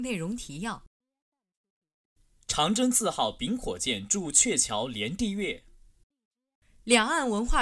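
No technical faults occur anywhere in this speech, so there is nothing to describe in time order.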